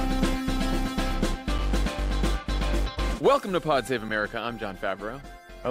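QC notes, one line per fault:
1.58 s and 4.09 s, gap between chunks. The audio drops out for about 6.5 ms at each point. The two holes fall 2.5 s apart, which fits chunks of that length joined with silence between them. Nothing is lost, but the flow briefly breaks at each join.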